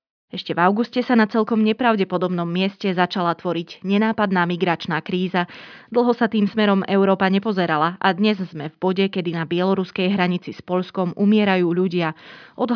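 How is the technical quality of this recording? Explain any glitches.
The recording carries no audible technical glitches, with the signal holding steady and intact throughout.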